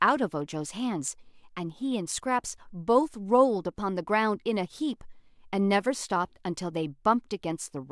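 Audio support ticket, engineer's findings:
Listened through the speech recording in full and found nothing that stood out.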